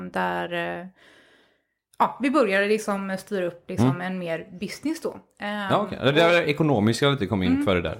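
No technical faults are audible at any point, and the speech signal remains steady and intact throughout the recording.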